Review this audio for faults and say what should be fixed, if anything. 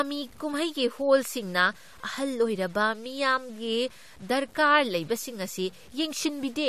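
The speech was likely reduced to low bit depth without dither, and the grain fits simple truncation to about 8 bits. Across the whole clip the rounding error tracks the speech, so quiet passages turn gritty and fizzy, with distortion sitting roughly 30 dB below the signal. To prevent it, keep at least 16 bits through the chain and add dither whenever reducing word length.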